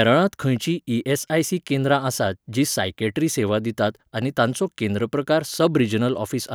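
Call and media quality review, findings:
No audible faults found.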